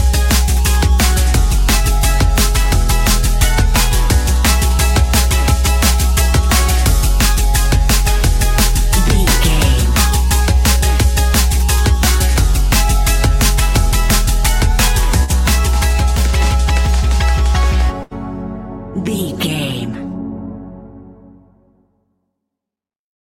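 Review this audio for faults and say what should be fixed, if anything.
Two bursts of packet loss, at 15.23–15.31 s and 18.03–18.13 s: the receiver holds the last sound as a fading buzz or hiss for 54 and 79 ms, then resumes with 60 and 80 ms missing. Unlike a silent dropout, the gap is filled rather than left empty. Forward error correction and a deeper jitter buffer would prevent this.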